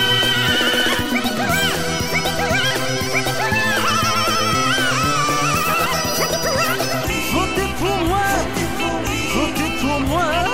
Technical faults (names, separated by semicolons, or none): section at the wrong speed